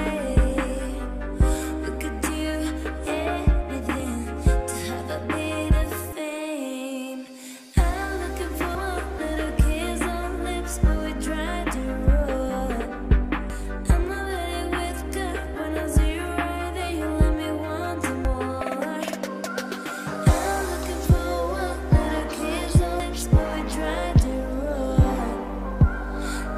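A chunked recorder likely dropped about a third of a second at each handover: audio missing between chunks, heard as abrupt skips at 4.0, 8.75, 13.5, 18.25 and 23.0 s.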